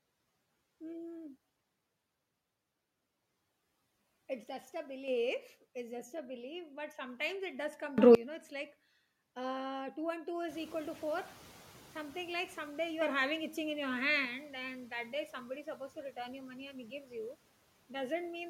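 From 4.44 to 5.08 s the whole signal, speech and background together, drops by about 6 dB, then returns. This is a sudden gain jump, likely a gain setting applied without a ramp. On the waveform the envelope steps down as a flat-edged block. The spectrogram shows every band dimming at once, with vertical edges at both boundaries. Right after "sometimes it does come", from 7.98 to 8.15 s, a far harsher jump lifts everything by about 24 dB, a loud blast with sheer walls on the waveform.

Around 10.5 s the room noise rises by about 14 dB and stays about 22 dB below the speech. From 10.48 to 12.69 s the noise suppressor is catching up. Its noise estimate lags the new level, so the noise comes through less reduced at first. It then sinks by about 5 dB over 2.21 s as the estimate adapts. The spectrogram shows a broadband haze that fades gradually rather than stopping cleanly.

From 13.01 to 14.25 s, leading into "and that day somebody", another sudden gain jump raises speech and noise by about 6 dB. 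It is again likely an unramped gain change, seen as a raised rectangular section of the waveform.

From 15.63 to 16.17 s, and from 16.72 to 17.13 s after "you money", the suppressor is cutting speech. It mistakes quiet parts for noise and pulls them down by about 9 dB and about 11 dB. Roughly a tenth and a fifth of a second are affected. Those parts sound swallowed. The spectrogram shows brief dark notches in the speech energy, and the waveform shows thin, sagging segments.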